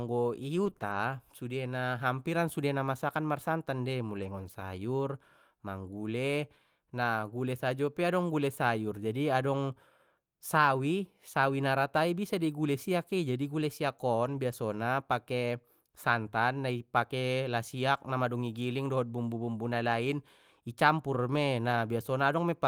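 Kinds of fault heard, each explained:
Repeated packet loss (robotic sound): Between about 0.65 and 0.95 s the speech keeps dropping out in short holes, the longest 20 ms, and each hole is papered over by stretching the preceding sound, so roughly a fifth of that stretch is synthetic fill. It sounds choppy. A waveform shows brief flattened or repeated cycles at those holes, and a spectrogram shows smeared, buzzy harmonics with small breaks.
Lost packet rebuilt from error correction: Speech continues without gaps but turns rougher and noisier where a lost stretch was replaced by a low-bitrate backup copy carried in the following packet. This happens at about 4.15 to 4.49 s (180 ms, which fits nine 20 ms packets), at 14.25 to 14.35 s (60 ms), and at 21.35 s, just after "na lain i campur". A spectrogram shows grainier, less defined harmonics there, with no silent gap in the waveform.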